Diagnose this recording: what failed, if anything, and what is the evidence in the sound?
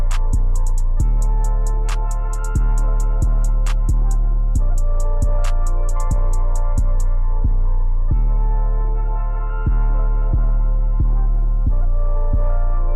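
From 11.34 s to 12.84 s the sound turns grainy, with a gritty distortion that rises and falls with the signal. This points to low bit depth without dither, most likely introduced at a sample-format conversion stage. The texture fits a reduction to 10 bits by plain rounding. Because no dither was added, the error tracks the waveform, sitting around 60 dB below the signal and coarsening the quietest passages into step-like grit.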